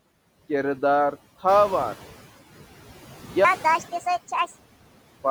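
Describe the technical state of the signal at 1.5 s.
At 1.5 s the noise suppressor is catching up. Around that point the room noise jumps by about 11 dB. From 1.47 to 2.2 s the suppressor's noise estimate lags that rise. The louder noise passes through with less reduction at first, then sinks over 730 ms as the estimate adapts.

Noise suppressor artifacts run throughout, with about 12 dB of reduction. The suppressor cuts noise-dominated bands frame by frame. The leftover noise dips between phrases and swells under the speech.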